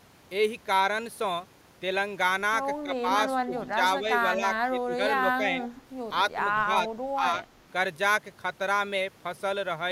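Around 2.83 to 3.04 s the speech dips by roughly 10 dB, and it happens again from 3.45 to 5.0 s, where about half a second of that stretch gets pulled down in pieces. That's speech suppressed in double talk. Both ends were likely talking at once, and the echo canceller couldn't tell this talker apart from the returning loudspeaker sound, so it ducked everything. You hear the voice sag and thin out in chunks.

At 5.75 to 5.82 s there's a brief echo leak: a faint copy of the voice trailing about 193 ms behind, sitting roughly 25 dB under the speech. The far end was likely on a loudspeaker, and its canceller let a scrap of our own audio slip back through. It's short and quiet, more of a ghostly flicker than a clear repeat.

Then from 6.65 to 7.44 s the double-talk suppression returns, with roughly 300 ms knocked down by about 10 dB in the same choppy way.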